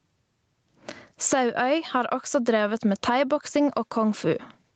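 Across the whole speech recording, the gain swings by roughly 15 dB, leaving loud and quiet passages squashed toward the same level. This gain pumping likely comes from the microphone gain being set much too high, so a fast limiter or compressor keeps clamping down on each peak and releasing in the gaps. The call path's limit of nothing above 8 kHz is audible too.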